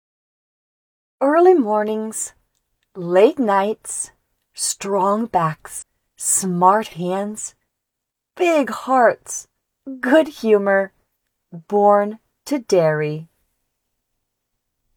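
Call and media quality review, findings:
Brief glitch at 5.78–5.83 s, about 44 ms. Damaged data in a compressed stream: decoder misreads corrupt frames, loses sync, resyncs at next header.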